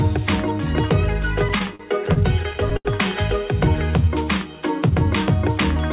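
From 1.49 to 2.88 s the audio shows repeated stalls (stutter). Packets reached the receiver late or more slowly than playback consumed them, so the jitter buffer emptied eleven times across that span. Each gap was bridged by extending the last sound, the longest about 80 ms and about 217 ms in total, roughly 16% of the span. Nothing is lost, but the sound drags and catches in short, uneven hitches.

Between 3.91 and 4.82 s comes a jitter buffer slow-down. With its reserve running short, the receiver rebuilt it by repeating single pitch periods and fragments of pauses many times over, adding 93 ms. Playback runs at about 91% speed with pitch unchanged, so sounds are drawn out. Throughout, the audio stops sharply at 4 kHz, which fits a narrowband G.711 call codec.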